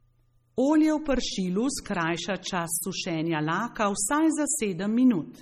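This is likely low-bitrate audio saved at a high bitrate: a coarse earlier MP3 encode, re-saved larger, leaves the speech smeared throughout with nothing above 14.7 kHz.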